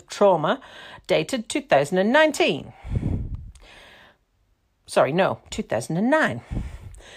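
No technical faults can be heard anywhere in the recording; the speech signal holds steady throughout.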